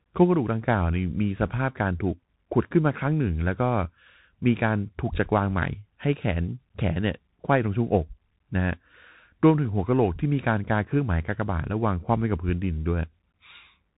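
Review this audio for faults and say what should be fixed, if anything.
The whole clip runs through a Bluetooth CVSD headset codec, and the damage is plain to hear. The speech stops dead at about 3.8 kHz, giving that boxed-in phone-call sound, which fits a 64 kbps CVSD link. The encoder sends only one bit per sample, up or down, with an adaptive step, so fast loud high content outruns it: s sounds come out scratchy and a grainy hiss sits under everything. To prevent it, switch the headset to a wideband or higher-quality profile, or record through a wired mic.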